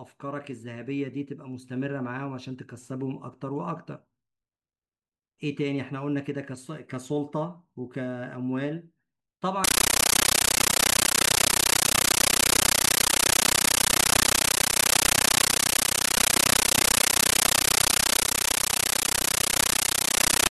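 From 9.64 s on, speech becomes a compressed stream played as audio: undecoded data blasts out as loud static, its steady 31.25 Hz chatter unlike random noise.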